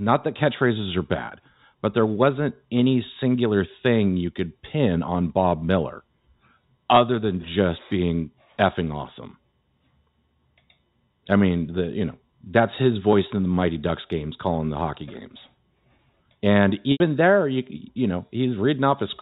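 At 16.92 to 17.00 s, just before "there you you", there's an 80 ms dropout handled by packet loss with pitch repetition. The receiver loops the last pitch period so it sounds held and buzzy, then fades before the speech cross-fades back in, over the G.711 telephone band.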